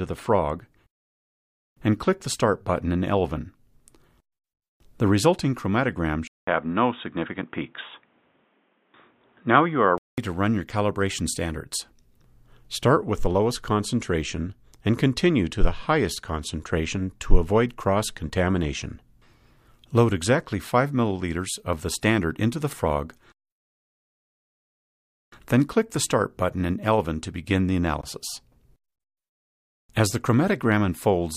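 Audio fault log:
6.27 to 10.18 s, input switched to a poorer device: A 200 ms silence opens the span. Then the sound turns dull and boxy, with nothing above 3.8 kHz, and a faint new noise floor sits well below it, while the level stays about the same. This is likely a change to a narrower-band microphone.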